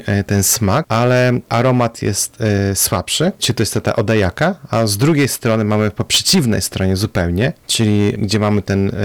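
From the first syllable to the end, the speech is running into hard clipping. The level is pushed about 11 dB past what some stage in the chain can pass, so every peak gets sliced off flat, and somewhere around one sample in twenty ends up sitting on that ceiling. Those squared-off tops throw harmonics way up the spectrum, which is why every louder syllable carries a harsh, fizzy crackle instead of a clean edge.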